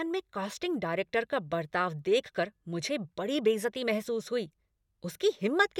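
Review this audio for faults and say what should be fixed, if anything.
Nothing in the recording needs fixing, as no technical faults can be heard. No corrective work is called for before it is used.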